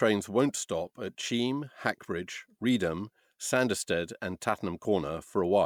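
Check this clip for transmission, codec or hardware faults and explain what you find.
Nothing turned up here; the speech comes across steady and intact, with nothing that points to trouble in the transmission path, the codec or the hardware.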